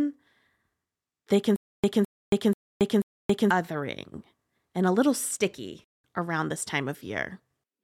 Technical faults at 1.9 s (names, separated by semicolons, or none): stutter with silent gaps